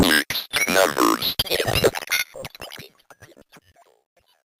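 A recording of sounds with a fade-out, and the tail of that fade has truncation distortion from about 1.84 s to the end at 4.6 s. As the level drops, the fade stage rounds the signal to coarse steps with no dither, which fits something like a 12-bit stage, so the waveform turns blocky. It's worst from 3.39 s to 4.61 s, where the quiet end goes gritty instead of dying away cleanly.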